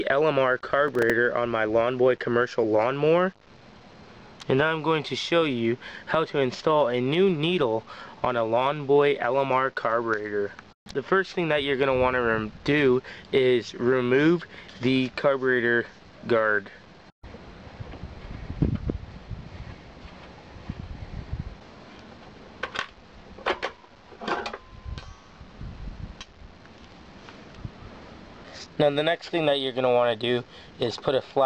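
Processor overload crackle runs from 0.88 to 1.10 s: a short gritty tear as a handful of roughly 5 ms buffers miss their deadlines and replay stale audio with hard edges. Unlike a single dropout, it is a rapid cluster of small glitches, ending once the load eases.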